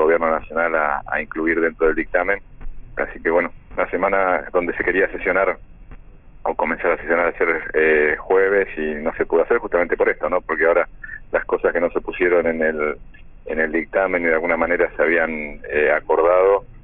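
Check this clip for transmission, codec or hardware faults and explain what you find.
One fault runs through the whole clip: aliasing. High content sounds gritty and metallic, with false tones folding back from around the 3 kHz band edge, roughly 25 dB below the main sound. This comes from a sample-rate reduction, consistent with a drop to about 6 kHz, done without an anti-aliasing filter first.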